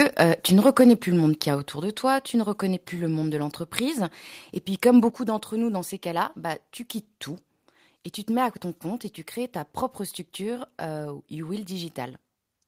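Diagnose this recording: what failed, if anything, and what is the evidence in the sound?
Microphone overload at the converter, likely from too much input gain: peaks flatten and crackle at 0.0–0.23 s and 0.66–0.93 s, about 4 dB over.

Microphone volume stepped down, likely by call processing reacting to that clipping: the level drops abruptly at 0.81, 1.8 and 5.1 s, by about 4, 4 and 6 dB.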